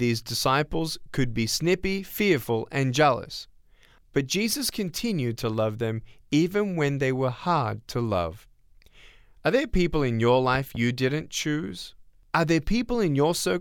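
A loud pop, actually two sharp pops, hits this speech recording between 10.55 and 10.78 s, somewhat above the voice. It is likely a voltage pulse from a plug, switch or static, with the speech continuing underneath.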